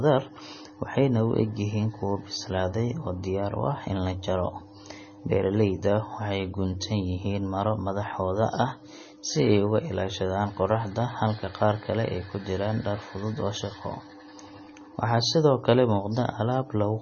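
From start to finish the speech carries heavy MP3 compression. Nothing is heard above 6.6 kHz, so s sounds lose their edge. The encoder has likely run short of bits, at a rate that fits about 24 kbps. It drops the treble at a fixed cut-off. It also zeroes weak frequency lines, which flicker on and off between frames. The result sounds watery and swirly. Consonant attacks smear.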